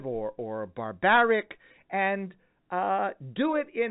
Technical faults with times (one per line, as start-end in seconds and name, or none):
none